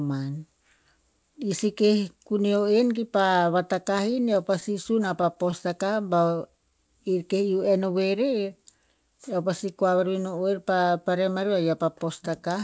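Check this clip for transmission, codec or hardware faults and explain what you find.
Three jitter-buffer faults appear in this speech clip, all between about 4 and 10 seconds. The call path's band limit is present throughout, with nothing above 8 kHz, consistent with G.722 at 64 kbps.

Repeated stalls (stutter), 3.98 to 5.91 s: packets reached the receiver late, so its buffer kept running dry. Each time, it extended the last sound to cover the wait. There are sixteen brief stalls, none longer than 12 ms, adding 160 ms in total with nothing lost, so the speech stutters and drags.

Jitter buffer slow-down, 6.01 to 7.01 s: with its reserve running low, the receiver rebuilt it by repeating single pitch periods and snippets of pauses. This stretches the passage by 92 ms, so it plays at 92% speed at unchanged pitch, sounding drawn out.

Jitter buffer speed-up, 8.94 to 10.13 s: the buffer held more audio than its target, so the receiver trimmed away short pitch-period pieces repeatedly, about a tenth of a second in all. 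The speech runs at 108% speed without any pitch change and sounds hurried.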